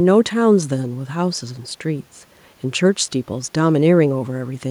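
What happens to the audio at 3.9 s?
At 3.9 s the speech continues intact, with only the room's own background noise about 40 dB below it.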